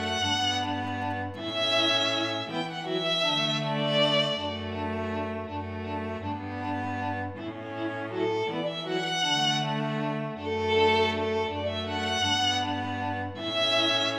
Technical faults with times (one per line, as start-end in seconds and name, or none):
0.40-1.51 GSM signalling bursts